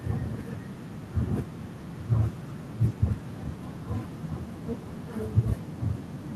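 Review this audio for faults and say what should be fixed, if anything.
Nothing stood out on listening to this speech recording, so there is nothing here that needs fixing.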